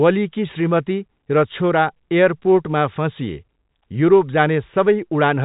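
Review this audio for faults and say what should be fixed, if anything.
Nothing to fix: the speech carries normal G.711 telephone coding, with nothing above 3.8 kHz and only faint level-following coding noise beneath it, and no fault shows up anywhere in the clip.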